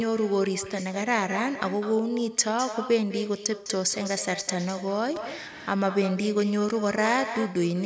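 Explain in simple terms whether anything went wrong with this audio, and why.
Echo with no canceller runs through the whole clip: the far end's loudspeaker fed the speech back into its microphone, so each phrase returns as a quieter copy about a fifth of a second later.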